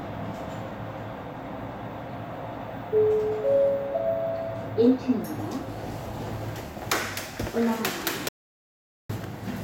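Near the end of this recording of sounds, the input signal was likely lost, through a dropped device connection or an accidental mute, while the recorder kept writing silence, producing an audio dropout to silence from 8.29 s to 9.09 s. The sound cuts off abruptly, leaving about 0.81 s of silence with no background or room tone beneath it, then resumes just as suddenly. Whatever occurred during that gap is missing from the file.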